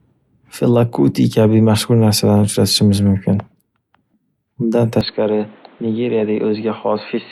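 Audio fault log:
5.01–7.32 s, input switched to a poorer device: the speech turns dull and boxy with no gap, drops a few dB and gains faint new background noise. The spectrogram shows nothing above 4.3 kHz, the waveform shrinks, likely from a narrowband microphone.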